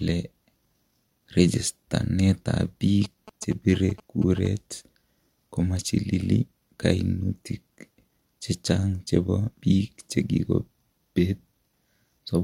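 From 3.04 to 4.47 s, a nearby phone's GSM signalling bursts are rectified into galloping 217 Hz buzzes, grouped unlike an active call's steady buzz.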